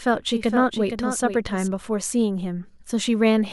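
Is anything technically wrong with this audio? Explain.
Yes. From the start until 1.68 s there is a doubled audio track: the speech was likely captured twice, with a slower second path mixing in its own copy. That dry copy trails by about half a second, roughly 10 dB quieter, then stops abruptly at 1.68 s.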